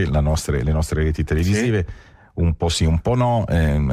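Nothing here stands out as a technical problem; it just runs along without any hiccups worth pointing to.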